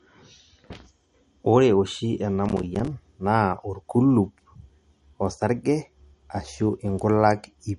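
A speech recording with audible MP3 compression throughout. Nothing comes through above 11.2 kHz, and the damage is plainly audible: a watery, swirling texture where weak frequency lines switch on and off between frames, which fits a low bitrate around 48 kbps. From 2.46 to 2.88 s there is processor overload crackle, a gritty tearing made of many short dropouts to silence with hard edges. The spacing fits small buffers of roughly 5 ms, with around fifteen deadlines missed over that stretch.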